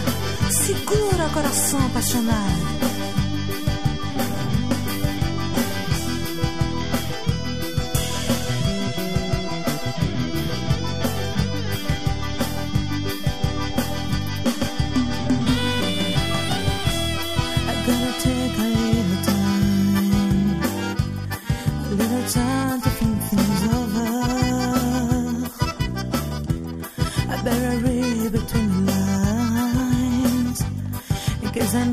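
No faults are audible anywhere in the recording.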